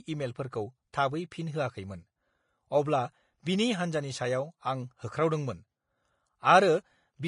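Throughout the speech, a spectrogram shows a ceiling at 10.5 kHz and stacked codec artefacts, likely from transcoding between lossy codecs, fitting Vorbis then MP3.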